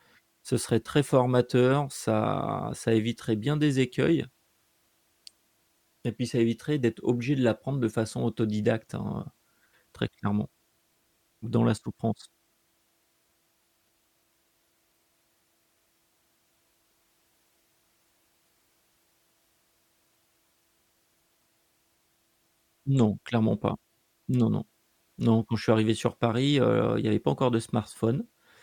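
No technical faults can be heard anywhere in the recording, and the signal stays steady and continuous throughout.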